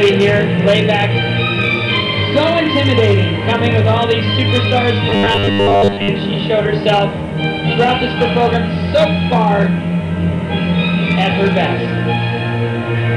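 Between 5.09 and 6.08 s, new audio likely stopped arriving in time, so the playback kept repeating a short stretch of about 10 ms in place of most of the real signal. This is robotic sound from repeated short buffers: the sound becomes a rigid, metallic buzz locked at 100 Hz.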